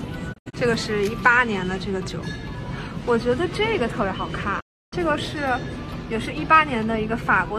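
At 0.32 s a digital broadcast dropout mutes the sound. Several short holes fill 120 ms in all, scattered to 0.55 s. The longest hole is 72 ms. Each fades out in 20 ms. At 4.59 s a 312 ms silence follows, ending at 4.94 s. What played meanwhile is lost.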